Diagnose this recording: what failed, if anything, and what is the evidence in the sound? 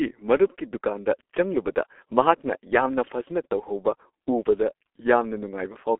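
The failure is at the codec stage: G.723.1 compression runs throughout. The speech sounds muffled and hoarse, and the consonants are blurred. Nothing is heard above 3.8 kHz, within a 300 Hz to 3.4 kHz telephone band. The heavy damage fits a bitrate near 6.3 kbit/s, where coarse, slowly updated frames smear detail.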